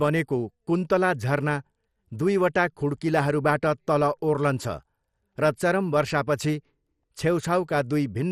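Throughout the speech, the sound is dull and gurgling, with a granular roughness, likely from MP2 compression at a rate that fits about 64 kbps. A spectrogram shows nothing above 14.8 kHz, with upper sub-bands flickering on and off in coarse blocks.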